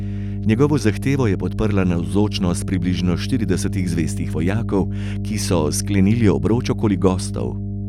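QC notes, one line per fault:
Throughout: mains hum, a steady 50 Hz tone sitting only about 5 dB under the speech, from power-line coupling through a ground loop or nearby transformer. Its fixed pitch and unchanging level distinguish it from broadband, fluctuating rumble or handling noise.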